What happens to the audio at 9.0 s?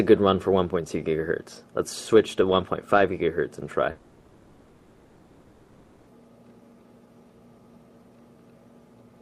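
Nothing goes wrong at 9.0 s; the audio plays through that moment intact, with no dropout, click or distortion.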